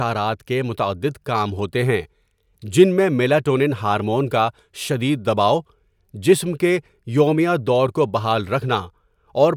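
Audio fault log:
Nothing to flag here, as no faults turn up anywhere in this speech recording.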